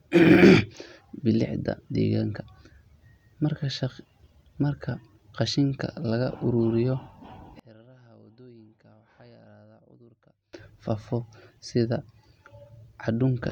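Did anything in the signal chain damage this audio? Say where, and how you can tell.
Yes. From 7.60 to 10.53 s the speech collapses by about 28 dB to a faint trace, then returns at full level. This is one channel inverted, likely from a polarity-swapped balanced connection in the analogue wiring, so the centred speech cancels when the channels are summed to mono.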